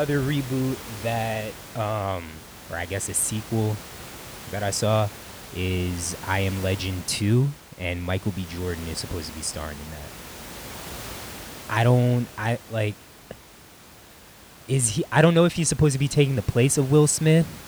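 No technical faults are audible.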